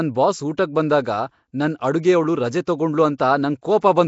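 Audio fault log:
throughout: Nellymoser compression. The speech has a rough, hissy halo and a smeared, underwater quality, with nothing above 7.7 kHz. This likely comes from Nellymoser Asao coding at a low fixed rate, fitting about 32 kbps, where weak bands receive no bits and are filled with noise.
2.65 s and 3.18 s: pre-echo. A brief hiss, about 18 ms and 17 ms long, runs just ahead of each sharp attack, which sounds softened. Each block's quantisation noise is spread evenly across it, so noise sized for the loud onset spills into the quiet moment before it.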